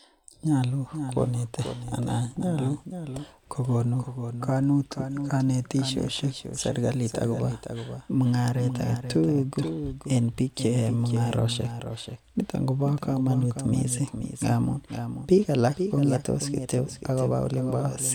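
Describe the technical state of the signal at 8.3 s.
At 8.3 s, as throughout, a doubled audio track: a full-band copy trails by about half a second, roughly 10 dB down, likely from a second, slower capture path.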